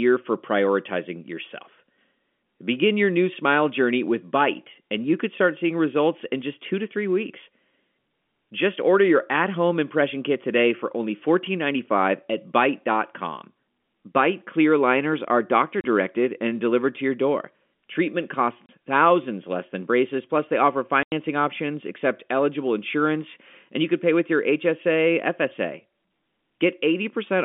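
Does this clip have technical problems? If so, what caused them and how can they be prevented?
Yes: packet loss filled with silence cuts flat, hard-edged gaps at 15.81–15.84 s (after "clear liners are doctor"), 18.66–18.69 s and 21.03–21.12 s (after "braces plus they offer"). On a waveform these show as flat silent blocks, and on a spectrogram as blank vertical strips. Their 30 and 90 ms lengths fit a 30 ms packet size. Packet loss concealment that interpolates lost frames, plus a jitter buffer and forward error correction, would prevent these holes.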